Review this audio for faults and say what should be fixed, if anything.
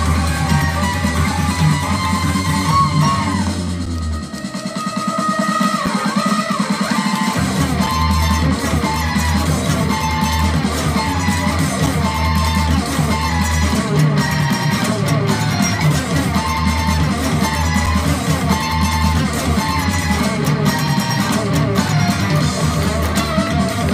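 Gaps between stream segments cut brief silences of about 4 to 7 ms at 3.86, 5.86, 7.86, 11.86, 17.86 and 21.88 s, all on 2-second segment boundaries where the timestamps fail to meet. The waveform shows flat-line notches with abrupt edges, and the spectrogram shows thin vertical blank stripes. The packager should align segment timestamps so each segment starts exactly where the previous one ends.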